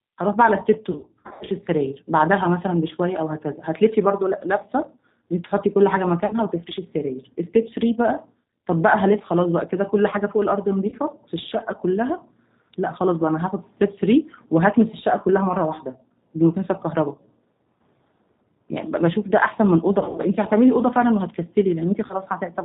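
The whole recording passes through the G.729 codec at 8 kbit/s, which models speech from filter and pulse parameters and drops everything above 4 kHz, leaving it plainly rough and synthetic. VoIP packet loss concealed by the speech codec occurs from 0.91 to 1.49 s (about 340 ms lost in scattered runs), then at 6.26 to 6.35 s, 10.88 to 10.94 s, 19.99 to 20.23 s and 22.06 to 22.14 s. There the decoder extrapolates missing frames, smearing the sound into a fading buzz or coloured noise with weak recovery.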